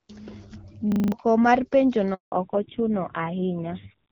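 At 0.92 s a system hang loop sets in. A single 40 ms slice of sound repeats five times, to 1.12 s, as the driver stalls while the hardware keeps replaying its ring buffer. It comes across as a harsh 25 Hz stutter, and about a fifth of a second of new audio is lost. On the waveform, five identical blocks sit side by side. The spectrogram shows vertical stripes every 40 ms.

From 2.14 s to 2.32 s there is a handover gap. The call switches networks, and no speech frames arrive during the changeover. The sound fades out within a few tens of milliseconds and leaves 180 ms of silence. Both the waveform and the spectrogram show a flat, empty band right across the frequency range.

At 2.32 s, as the new link starts, the call falls back to narrowband for the rest of the clip. The audio turns duller and rougher. On the spectrogram, everything above 4 kHz disappears as a hard horizontal ceiling. The earlier section shows energy reaching about 7 kHz, which fits HD Voice at around 12.65 kbit/s. 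The coarser texture afterwards suggests a drop to a low-rate AMR narrowband mode, such as 5.9 kbit/s.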